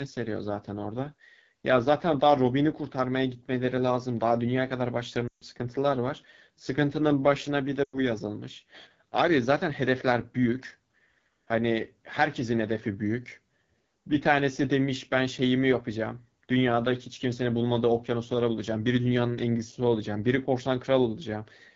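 Speech runs through the AMR wideband (HD Voice) codec with plainly audible damage: a rough, raspy texture that fits one of its lowest rates, around 8.85 kbit/s. A spectrogram shows energy ending near 7 kHz, with a smeared, noise-like band from 6.4 to 7 kHz above sparser modelled harmonics. Lost AMR speech frames cause two dropouts, at 5.28 to 5.44 s (140 ms) and 7.84 to 7.99 s (100 ms). In each, the decoder repeats its last good settings at falling gain, so the sound quickly fades. On the waveform, the envelope decays toward near-silence before recovering weakly, which fits runs of about seven and five 20 ms frames.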